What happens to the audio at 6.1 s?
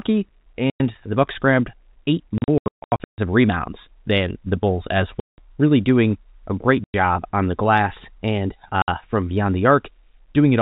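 Nothing goes wrong at 6.1 s: the speech there comes through intact, carrying only the narrow telephone band of its G.711 coding.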